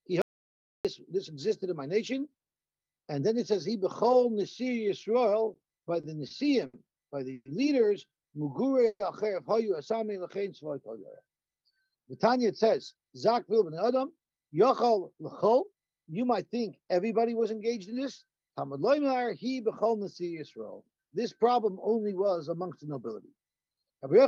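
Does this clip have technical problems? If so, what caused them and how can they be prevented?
Yes. The audio dropout to silence at 0.22 to 0.85 s lasts about 630 ms of silence, with no room tone at all. Unlike a freeze, nothing fills the hole, so whatever happened there is simply gone. The likely cause is a lost input, such as a disconnected device, a failed link or a stray mute. Secure connections and monitor input levels so a loss is caught during recording.

Repeated stalls (stutter) run from 5.53 to 6.76 s: five short gaps, the longest 70 ms, filled with about 180 ms of continued sound in total, roughly 15% of that stretch. Nothing is lost, but the audio drags. It differs from a freeze by recurring in quick succession rather than once. A larger or adaptive jitter buffer and steadier network delivery prevent this.

Two call audio freezes occur, at 7.33 to 7.48 s and 8.87 to 9.03 s. 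The last sound is continued and fades, ending in 20 ms and 50 ms of silence respectively, before the audio resumes exactly where it stopped. The delay grows by 120 and 130 ms, and nothing is missing, which separates these from a dropout. Packets were likely held up in transit. Prioritising call traffic (QoS) and avoiding congested or wireless links reduces these.

The jitter buffer slow-down at 8.43 to 8.77 s plays at 91% speed and adds 36 ms. The one at 10.07 to 10.95 s plays at 93% and adds 71 ms. Repeated pitch periods stretch the sound, but the pitch stays put, unlike a slowed tape. A steadier network keeps the buffer from running low.

The jitter buffer speed-up from 12.74 to 16.86 s runs at 107%, trimming about 0.3 s by cutting short pitch-period slices. The pitch holds and the sound feels hurried. This is the opposite of the slow-down, draining an overfull buffer after bunched packets arrive. 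Smoother packet delivery avoids the build-up.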